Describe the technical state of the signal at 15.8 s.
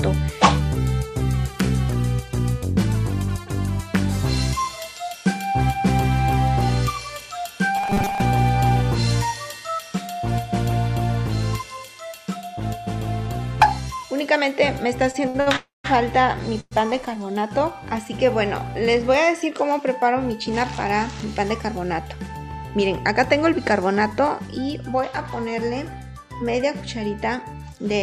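At 15.8 s the audio is stalled inside a call audio freeze running from 15.56 to 15.86 s. The last sound is stretched into a fading buzz or hiss that drops to silence for roughly the final 170 ms before playback resumes exactly where it stopped. The likely cause is delayed packets draining the jitter buffer, so the receiver filled about 279 ms itself. Nothing is lost, but everything afterward arrives 279 ms later.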